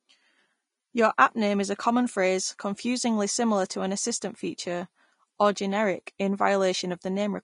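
From start to finish the speech carries plainly audible damage of the kind left by Vorbis compression, likely at a low setting; the coarseness fits a bitrate near 32 kbps. The treble has been rebuilt as noise of similar energy, so sibilants turn hissy and grainy, voiced tones sound roughened and attacks blur. Unlike a plain low-pass filter, which dulls the top cleanly, the high band here stays present but smeared into noise.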